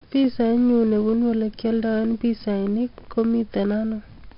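A gritty hiss rides on every loud stretch of the speech from start to finish, rising and falling with the level, and sharp onsets come out roughened and distorted. Nothing reaches above 5.3 kHz, so the sound is dull. This is heavy 4-bit ADPCM compression: each sample is coded as a small step from a predicted value, and the adapting step size lags behind fast attacks. The band limit and a rate near 44 kbps point to roughly an 11 kHz sample rate.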